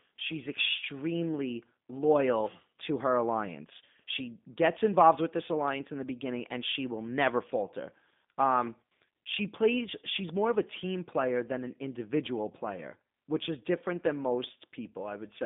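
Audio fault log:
Throughout, G.729 codec: the speech is confined to a telephone band of roughly 150 Hz to 3.6 kHz, and it has a plainly audible rough, synthetic edge. The coder does not keep the waveform. It rebuilds each 10 ms frame from a vocal-tract filter, a pitch predictor and a few pulses, so fine detail between pulses is lost and nothing above the band survives. That sound fits an 8 kbit/s G.729A stream.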